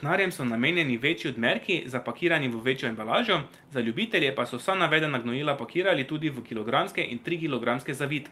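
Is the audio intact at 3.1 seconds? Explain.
Yes, at 3.1 seconds the audio is intact, with no dropout, click, distortion or other technical fault at that moment.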